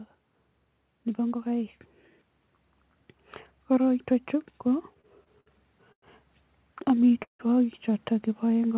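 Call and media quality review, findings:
Repeated stalls (stutter), 4.86–5.48 s and 6.78–7.41 s: packets arriving late, jitter buffer repeatedly running dry, receiver stretching the last sound. Five gaps (122 ms filled, longest 58 ms), then six (213 ms, longest 165 ms, faded). Audio drags and stutters, nothing lost.

Call audio freeze, 5.92–6.04 s: sound halts for 0.1 s, mostly silent (80 ms), then resumes where it stopped with nothing missing. Likely packets held in transit, emptying the jitter buffer, with concealment fading quickly to silence. Narrowband G.711 path, nothing above 4 kHz.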